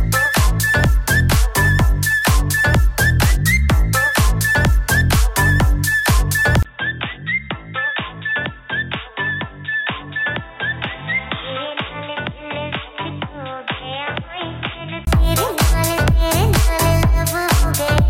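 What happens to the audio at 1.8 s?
Nothing goes wrong at 1.8 s; the audio plays through that moment intact, with no dropout, click, distortion or other fault.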